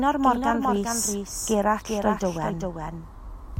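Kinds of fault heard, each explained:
Doubled audio track: The speech is heard twice, all the way through. A second copy trails the first by a fixed gap of roughly 0.4 s. It sits around 5 dB below the original. The copy carries the full frequency range. It has no tail, no decay and no added room sound, so it is not an echo. The likely cause is the same signal being mixed in again through a slower path.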